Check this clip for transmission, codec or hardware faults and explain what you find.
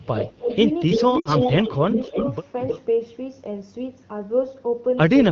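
Three kinds of fault turn up: echo leak, speech suppressed in double talk, and lost AMR speech frames, all carried over a wideband AMR (HD Voice) link whose light coding texture fits a rate around 12.65 kbit/s.

Echo leak is heard at 0.03 to 0.33 s, 0.51 to 0.57 s, 0.9 to 2.3 s and 2.58 to 2.81 s. A loudspeaker-side echo canceller likely failed to remove its microphone pickup, returning a copy delayed by about 0.31 s. It sits about 10 dB below the speech at first, then about 25 dB, about 5 dB and about 10 dB.

Speech suppressed in double talk occurs at 0.39 to 0.49 s and 1.63 to 1.9 s. With both ends active, the echo canceller likely could not tell the talker from echo and attenuated everything. The voice dips by roughly 10 dB, then roughly 15 dB, for a fraction of a second.

Lost AMR speech frames hit at 1.2 to 1.35 s. Corrupted radio frames forced the decoder to reuse the last good parameters with falling gain for about 60 ms, which fits three 20 ms frames. 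The voice drops to near silence within two frames, then returns weak or rough for a moment.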